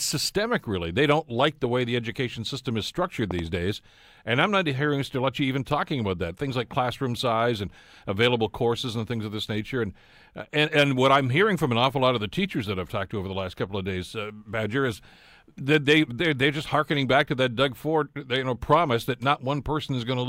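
At 3.31 to 3.41 s there's a loud pop, actually two sharp thumps close together, standing out well above the speech, around 15 dB hotter. Underneath, the talking just carries on. It's likely a voltage spike from a plug, switch or static discharge.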